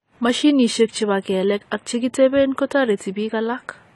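The speech was most likely squeezed through AAC compression at a low bitrate, around 32 kbps. Nothing survives above 11.5 kHz, leaving the whole clip dull, with plainly audible fizzy, warbling smear.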